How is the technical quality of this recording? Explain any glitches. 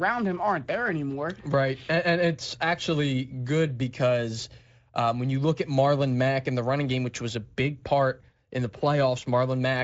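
Nothing in this recording stood out as a glitch or technical problem on listening.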